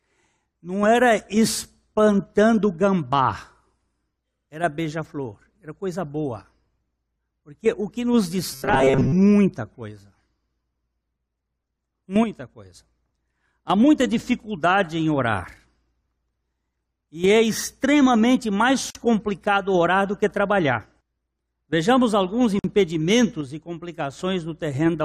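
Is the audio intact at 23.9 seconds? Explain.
No. From 23.41 to 24.19 s the speech falls abruptly by about 6 dB and then returns just as suddenly. The likely cause is one channel dropping out: with one side of the stereo pair gone, the mono sum keeps only half of the shared signal. What sets it apart from a full dropout is that the sound never goes silent, and unlike a fade or gain ride, the step is instant in both directions.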